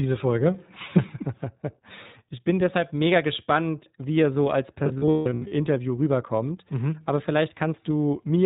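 The whole clip is speech carried through the iLBC codec. Its narrowband coding removes everything above 4 kHz, so the voice sounds thin and boxed in. The codec damage is plainly audible. Consonants and vowels have a rough, slightly synthetic edge, because each short frame's excitation is rebuilt from a compact model. The grain of the sound fits 20 ms frames at around 15.2 kbps, the higher iLBC rate.

Lost iLBC frames begin at 4.84 s, right after "wie er so als", and run to 5.53 s. About 440 ms of audio is missing, scattered across 680 ms. That points to roughly 22 dropped frames. The longest single gap is around 150 ms. In each gap the decoder repeats the last pitch cycle blended with noise. The result is a held, buzzy, breathy vowel that fades on the longer runs. Each frame decodes independently, so clarity returns almost immediately after every gap.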